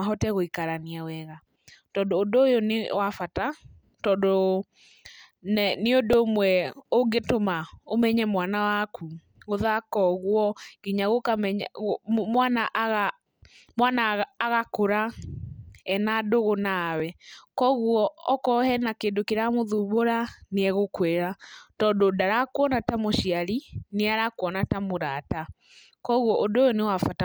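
At 6.13 s a repeated buffer produces a brief buzz: a tiny block of about 1.45 ms, which fits a 64-sample buffer, plays three extra times because fresh audio missed its deadline, and the hard joins fuse into a click-like burst. A second, shorter repeated buffer follows at 17.00 s, just after "ena ndũgũ", where the same small block repeats once and is heard as a single click. Essentially no audio is lost in either case.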